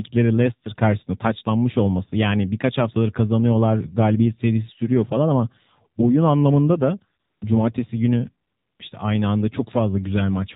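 From the start, the whole clip has the AMR narrowband mobile codec on it. Everything sits in an 8 kHz-sampled band, so nothing above 4 kHz survives, and the speech comes out boxy and thin. The codec rebuilds the voice from a vocal-tract model fed by sparse pulses every few milliseconds, and the damage here is plainly audible: a buzzy, synthetic edge on the voice that fits one of AMR-NB's lower modes, around 7.4 kbps.

Then there are two stretches of AMR comfort noise, one from 7.20 to 7.42 s, about 220 ms, and another from 8.48 to 8.80 s, about 320 ms. In each, the sender decided nobody was talking and stopped sending speech frames, so the receiver filled the gap with generated noise built from a rough level-and-spectrum sketch. You hear the real background drop out and a smooth, even hiss switch in, then switch back off when speech resumes.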